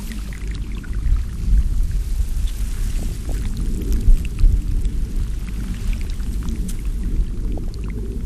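Throughout, the sound is dull, with a gurgling, granular grain and upper treble that flickers in and out. The likely cause is MP2 compression at a low rate, consistent with about 80 kbps. Too few bits forced whole upper sub-bands off and left the rest coarsely quantised.

From 2.99 to 3.31 s, and again from 7.58 to 7.68 s, short blips of noise break over the sound. This is DAB burbling. Bit errors at a rate of a fraction of a percent got into the MP2 data and corrupted samples, putting short blips of noise in single sub-bands.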